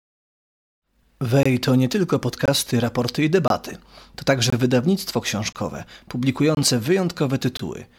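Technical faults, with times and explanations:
1.43, 2.46, 3.48, 4.50, 5.53, 6.55 and 7.57 s, gap between chunks: hard-edged 23 ms silences recur every 1.0 s, around "to nie tylko" and "raporty i". Silence sits between the one-second chunks, so no sound is lost but every join breaks.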